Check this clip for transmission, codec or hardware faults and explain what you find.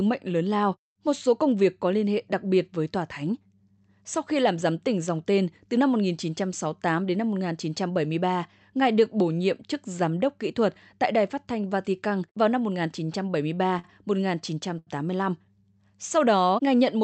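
Three short stalls from a late packet occur in this speech clip, at 13.05 to 13.10 s, 13.79 to 13.86 s and 14.79 to 14.89 s. At each one the receiver ran out of buffered audio and held the last sound for about 25, 46 and 80 ms, then continued from where it stopped. You hear a syllable drag briefly with a slight buzz or dip. Unlike a lost packet, nothing is skipped; the rest of the speech just runs slightly later. The call path sounds like Opus with audio up to about 8 kHz.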